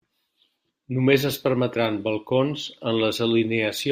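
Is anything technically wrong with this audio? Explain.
No, nothing technically wrong stood out on listening to this speech recording.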